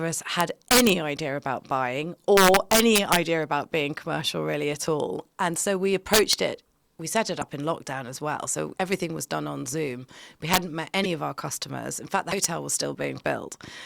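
Speech, where peaks are pushed past the integer limit (integer overflow) and wrap to the opposite sign, giving violent cracks at 0.41–0.89, 2.37–3.16, 6.14–6.33 s (after "so we", before "it we set it"), 10.54–10.57 and 12.44 s (after "fact the"). The overdrive is about 0 to 5 dB. Dropped frames likely broke the MP3 bit reservoir, causing brief skips with chirps or noise bursts at 7.41–7.43, 11.03–11.06 and 12.30–12.33 s (after "fact the"), each about one 24 ms frame long.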